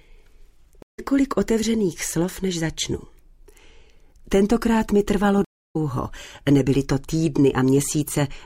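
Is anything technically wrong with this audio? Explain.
Yes, the audio has two stream reconnects. It drops to silence for 154 ms at 0.82 to 1.00 s and for 301 ms at 5.45 to 5.76 s, then resumes slightly further along, skipping roughly 150 ms and 200 ms. The connection broke, and the player reconnected and restarted its decoder mid-stream at a later point.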